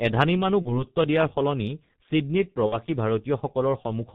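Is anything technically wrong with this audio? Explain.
Yes. The whole speech clip has passed through the G.723.1 codec at about 6.3 kbit/s, and the damage is heavy. This codec codes the voice in 30 ms frames and keeps nothing above 4 kHz. Its model of the voice updates slowly, so it cannot follow fast changes. The result is muffled, hoarse speech. Consonants lose their edges and blur into the vowels around them.

There are also two spots of VoIP packet loss concealed by the speech codec. The first runs from 0.62 to 0.84 s. The gap there fits one lost 30 ms frame. The second runs from 2.66 to 2.77 s and fits two lost frames, about 60 ms. In each case the decoder had no data and repeated its last pitch and filter at falling gain. The sound smears into a buzzy tone or a coloured noise that fades. Because each frame builds on the one before, the voice stays weak or distorted after the gap itself ends.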